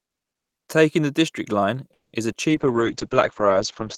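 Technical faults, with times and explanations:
1.93–2.27 s, call audio freeze: the sound stretches into a fading buzz, then about 160 ms of silence, likely packets stalling and the jitter buffer running dry. Nothing is lost, just delayed.
2.32–2.36 s, short concealed packet loss: about 20 ms never arrived, so the decoder patched it by extending the previous sound, leaving a brief smear.
2.50 s to the end, call bitrate drop: the encoder falls from 40 to 8 kbps and the bandwidth narrows from 20 kHz to 8 kHz, so the audio turns muffled and rough.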